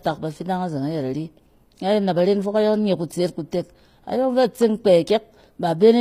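The treble of this speech clip sounds bright but synthetic from start to finish, with s sounds that come across gritty and metallic, and nothing at all above about 15.4 kHz. The likely cause is HE-AAC compression at a low bitrate, around 24 kbps: only the lower spectrum is truly encoded, and the upper band is regenerated by copying lower bands upward under a coarse envelope, so harmonics there no longer line up with the originals.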